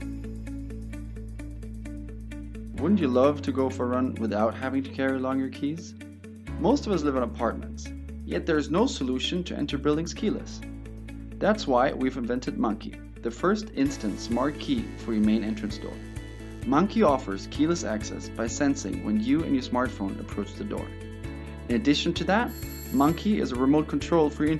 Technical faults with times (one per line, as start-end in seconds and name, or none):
none